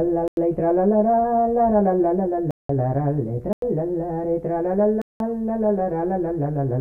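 At 0.28, 2.51, 3.53 and 5.02 s the sound drops into a block of digital silence, lasting about 93, 186, 93 and 186 ms, which fits missed buffers of 4096 and 8192 samples. Each time the sound cuts out and back with no fade, leaving a short hole.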